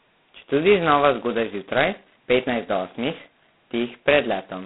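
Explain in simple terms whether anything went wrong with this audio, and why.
Yes, something went wrong, and it runs through the whole clip: the speech has been squeezed through G.726 ADPCM at its lowest setting. Instead of storing each sample, this telephone codec sends a rough guess at how much the sound changed, using very few bits. That's why a harsh, rasping hiss rides along with the speech and gets louder as the speech does. It also sounds thin and phone-like, with nothing above about 3.9 kHz.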